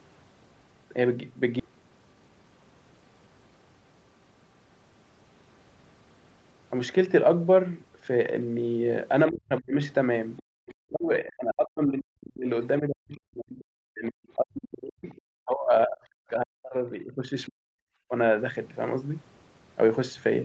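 Skip ahead at 1.59 to 1.61 s: playback jumps straight over a missing stretch of speech, around 0.7 of a second, with no filler in between. Audio that arrived late had piled up behind newer audio, and the receiver discarded the backlog to catch up. The two sides of the cut are spliced almost directly, so the speech lurches forward, and the end-to-end delay shrinks by about the same amount.

Jitter buffer speed-up from 1.69 to 2.72 s: right after the skip, the speech runs at about 114 percent of normal speed while keeping its pitch. The buffer still held more audio than its target, so the receiver trimmed many tiny pitch-period-length slices in quick succession, roughly 150 ms in total. The effect is a brief rushed quality, as if the talker suddenly hurried.

Speech suppressed in double talk at 9.30 to 9.77 s, 10.57 to 12.47 s, 12.79 to 13.60 s, 13.88 to 15.07 s and 15.33 to 17.81 s: the talker's speech sinks, at its deepest by around 40 dB, and breaks into fragments or vanishes in places. 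This is most likely the echo canceller reacting to both parties speaking at once. Unable to separate near speech from loudspeaker echo, it attenuated everything, repeatedly through this section.

Other side's voice leaking through at 10.37 to 10.42 s and 15.09 to 15.21 s: short, faint scraps of a second voice slip through, well below the talker, at around 25 dB down in the first and about 35 dB down in the second. The probable cause is residual echo. The far end's audio, played from the talker's loudspeaker, reached the microphone and was not fully cancelled.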